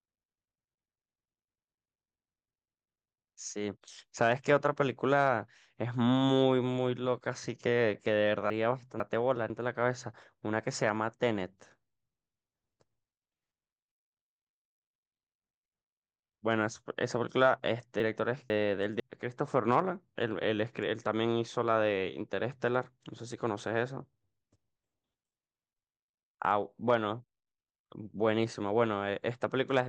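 A jumbled moment interrupts the speech from 8.5 to 9.5 s and again from 18.0 to 19.0 s. In each, chunks are out of order: one 500 ms chunk plays a chunk late, swapping two half-second pieces and leaving three hard joins.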